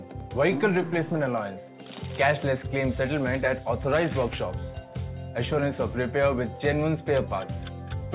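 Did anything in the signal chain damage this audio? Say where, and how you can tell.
No, nothing in the signal chain damaged this audio.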